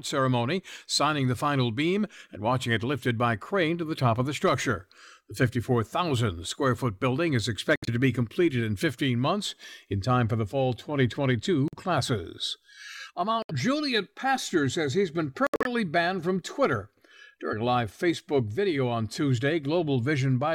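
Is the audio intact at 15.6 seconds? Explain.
No. At 15.6 s the sound falls inside a corrupt frame muted dropout running from 15.47 to 15.67 s. Bit errors damaged the compressed frames, the decoder rejected them, and the player substituted silence, leaving an abrupt 0.2 s hole with the surrounding timing unchanged.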